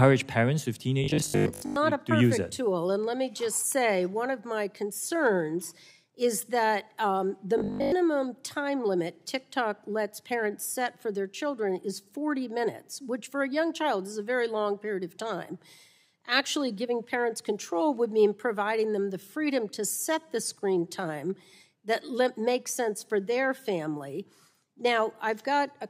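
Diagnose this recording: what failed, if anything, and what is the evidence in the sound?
Robotic sound from repeated short buffers at 1.04 to 1.76 s and 7.58 to 7.92 s: a rigid 50 Hz buzz replaces most of the sound. At the driver or buffer stage, a short segment, fitting a 20 ms buffer, is likely being replayed while new audio is skipped.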